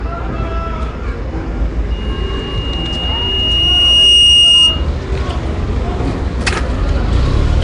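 Throughout, the audio was likely coded with Nellymoser Asao, the old Flash microphone codec. Its coarse bit allocation leaves weak bands to be filled with noise. The plainly audible damage is a rough, hissy, smeared quality, consistent with about 44 kbps, with nothing above 10.7 kHz.

From 1.91 s to 4.88 s, a microphone was picking up the loudspeaker it feeds, and the loop's gain exceeded one at 2.8 kHz. This loudspeaker feedback squeal is a single tone that swells over roughly two seconds until it sits about 10 dB above the sound, then stops.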